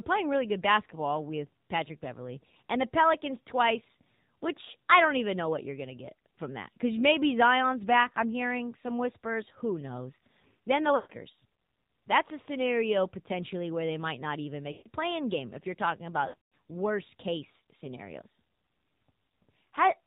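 A speech clip carried over the AMR narrowband mobile codec. The 8 kHz sampling removes everything above 4 kHz, and the coding sounds like a low-rate mode, plausibly around 7.4 kbps, which is why the voice comes out muffled and thin with a plainly audible buzzy, synthetic edge. Lost AMR speech frames then break the signal three times. At 10.96 to 11.12 s and again at 14.72 to 14.88 s, about 140 ms of audio is missing each time, which fits a run of roughly seven 20 ms frames. The decoder fills each gap by repeating its last good pitch and vocal tract settings at falling gain, so the sound smears out and sinks toward silence before recovering. From 16.28 to 16.51 s the damage is scattered over about 240 ms, with roughly 200 ms lost in total and a longest unbroken run of 140 ms. This gives a stuttering mix of brief dips, warble and a short fade rather than a single clean gap.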